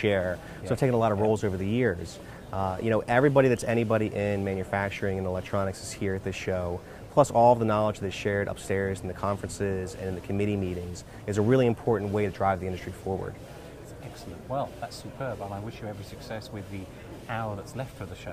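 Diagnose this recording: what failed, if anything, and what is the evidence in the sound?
Nothing failed; no faults heard.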